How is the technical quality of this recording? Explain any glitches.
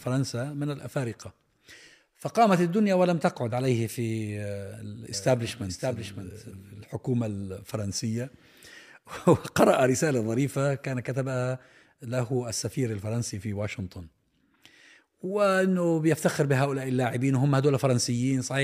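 The recording has one clear glitch, a doubled audio track between 5.14 and 6.84 s. For that stretch a second, full-band copy of the speech runs about half a second behind the original, roughly 5 dB quieter, so everything is heard twice with a distinct lag. The likely cause is the same signal reaching the mix again through a slower capture path. There is no decay or room tone on the copy, and it starts and stops abruptly. On a spectrogram the harmonic patterns appear duplicated, shifted right by about half a second and slightly fainter. In the waveform, overlapping envelopes begin and end with hard edges.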